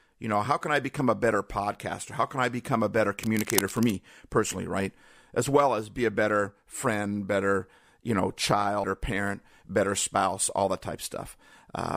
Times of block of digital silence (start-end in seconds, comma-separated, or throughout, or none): none